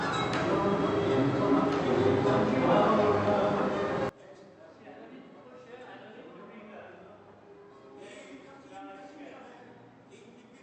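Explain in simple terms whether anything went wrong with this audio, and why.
From 4.09 s to the end, the sound suddenly turns faint. The likely cause is one channel inverted: the two stereo sides cancel each other when combined. Unlike a simple volume drop, it's the sound shared by both sides that cancels.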